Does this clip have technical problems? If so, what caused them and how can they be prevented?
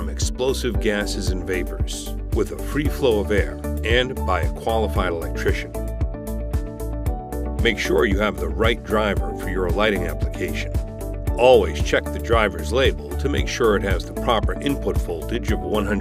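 No, nothing in the recording points to a capture, transmission or playback fault, so there is nothing to trace to a cause or prevent.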